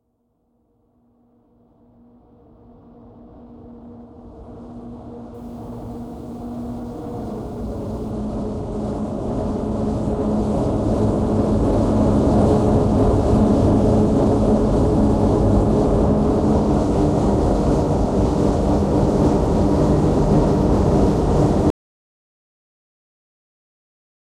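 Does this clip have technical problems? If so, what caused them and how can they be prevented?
Yes. From 5.34 to 8.11 s the sound turns grainy, with a gritty distortion that rises and falls with the sound itself. This is low bit depth without dither. The level steps are coarse enough to suggest about 9 bits with rounding, and the error sits roughly 45 dB below the signal. The likely cause is requantising to a short word length without adding dither. Plain dither noise would stay constant whatever the sound does. To prevent it, keep a higher bit depth through processing and apply dither whenever reducing word length.

At 21.70 s the sound stops abruptly, and the clip stays silent through to the end. This is an audio dropout to silence. The gap is silent with no room tone or noise floor, which distinguishes it from a fade, a noise gate or a quiet moment in the scene. The likely cause is the input being lost, through a disconnected device, a failed link or an accidental mute, while the recorder kept writing silence. 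To prevent it, secure connections and monitor input levels throughout the recording.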